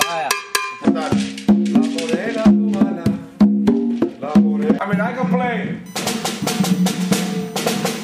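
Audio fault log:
5.86–8.04 s USB whine: a thin, fixed-pitch whine enters and lasts to the end, built on 1 kHz and loudest at 6 kHz, roughly 25 dB under the audio. Current drawn in the USB bus's 1 ms frames leaks in through power or ground.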